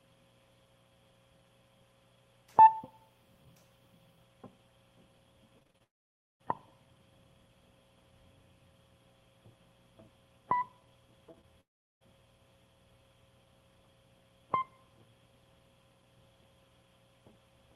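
From 5.59 to 5.82 s the music suffers repeated packet loss, heard as a robotic sound. Five separate gaps open in quick succession, the longest 32 ms, and each is patched by extending the preceding audio. Close to half of that stretch is concealment rather than real signal. The music turns choppy, losing pieces just as it reaches the next problem.

From 5.84 to 6.42 s comes a long network dropout, likely a stall in delivery. About 0.56 s of audio never reaches the player. Concealment carries the last sound for only a moment before it collapses into roughly half a second of silence. The music then resumes further on, and the missing part is simply gone.

At 11.32 to 11.35 s and again at 11.41 to 11.45 s there is short concealed packet loss. About 20 ms of data goes missing each time, and the receiver extrapolates from the sound just before to fill the gap. Each repair is heard as a brief smear or small wobble in the music, with fine detail briefly blurred.

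A second long network dropout follows from 11.61 to 12.03 s, likely another delivery interruption. Around 0.4 s of audio is lost, and after a fleeting tail of concealed sound roughly 0.37 s falls silent. Playback comes back later in the music with that stretch missing. Throughout the clip, the call codec's upper limit near 12 kHz cuts off the top end.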